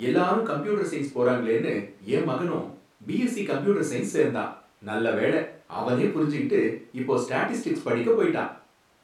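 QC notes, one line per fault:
No audible faults in this speech recording.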